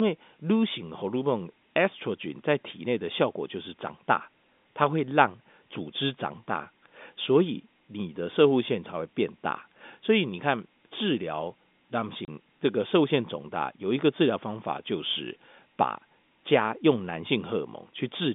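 At 12.25 s the speech drops out for about 30 ms, through 12.28 s. That's packet loss filled with silence: the receiver had nothing to play, so it just played silence. The hole starts and ends abruptly. Its length fits three lost 10 ms packets back to back. The telephone-band G.711 coding around it sounds as expected, topping out near 3.6 kHz.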